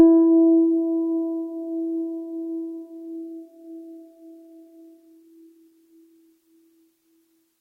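A music recording with one short concealed packet loss at about 5.69 to 5.73 s: roughly 20 ms of audio arrived too late, and the receiver extended the preceding sound before crossfading back. It heard as a brief smear. On a spectrogram the harmonics stretch flat across a narrow vertical band, and the waveform shows a repeated cycle there.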